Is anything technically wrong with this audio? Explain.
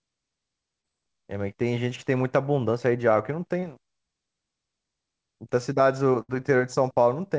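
Yes. At 0.82 s and again at 3.60 s the speech briefly smears and wobbles for about 40 ms. This is short concealed packet loss: roughly 20 ms of audio never arrived in time, and the receiver bridged each hole by extending the preceding sound before blending back into the real signal.

At 6.22 s a longer dropout turns the sound into a held, fading continuation lasting about 66 ms, after which the speech resumes with roughly 60 ms skipped. This is a burst of packet loss: several consecutive packets were lost or late, so concealment stretched and attenuated the last sound across the gap.

Both faults sit within a call path whose audio stops at 8 kHz, which fits G.722 coding.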